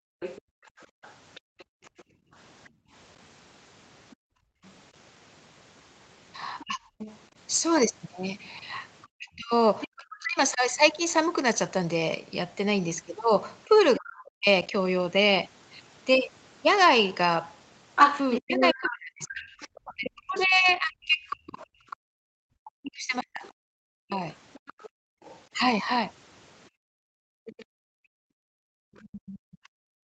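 From 0.0 to 4.63 s the background is gated by the echo canceller: while the loudspeaker plays, it pulls the microphone down by as much as about 39 dB, so the room sound drops out for roughly two seconds in total before recovering.

From 0.2 to 9.88 s the other side's voice is leaking through, about 15 dB below the talker, likely because the echo canceller left residual loudspeaker signal in the microphone.

From 6.64 to 10.62 s, and again from 13.68 to 14.48 s, the speech is suppressed in double talk. With both sides active at once, the canceller likely could not tell its own talker from the echo and ducked the speech by around 40 dB, for about a second and half a second of the speech respectively.

From 17.95 s to the end, the leaking far-end voice returns much stronger, only about 5 dB under the talker, and again is likely residual echo the canceller failed to remove.

From 18.41 to 25.55 s, double-talk suppression hits again, likely for the same reason, chopping roughly four seconds of speech by up to around 40 dB.

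From 21.89 s to the end, background gating by the echo canceller resumes, with the room sound dropping by up to about 40 dB. The whole clip is band-limited at 8 kHz by the Opus call path at 32 kbps.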